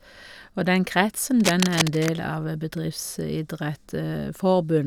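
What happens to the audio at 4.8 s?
Nothing goes wrong at 4.8 s; the speech carries on intact through that moment.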